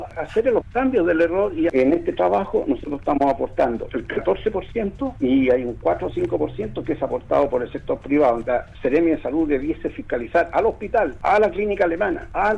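No technical faults can be heard anywhere in the audio; the signal stays steady and intact throughout.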